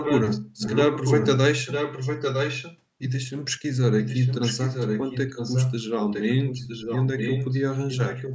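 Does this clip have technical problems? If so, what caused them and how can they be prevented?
Yes. A delayed copy of the speech trails it at 0–0.41 s, 0.57–1.3 s, 1.65–2.78 s, 3.99–7.62 s and 7.9 s to the end. It lags by about 957 ms and is only a little quieter than the speech. This is likely an echo leak. The far side's echo canceller failed to remove its loudspeaker output. Using a headset there, or better echo cancellation, prevents it.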